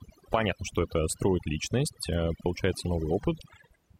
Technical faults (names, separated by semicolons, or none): overdone noise removal